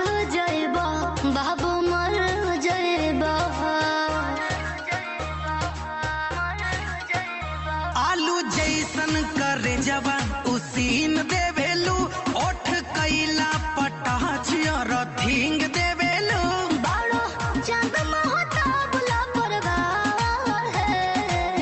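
No technical faults can be heard in this audio.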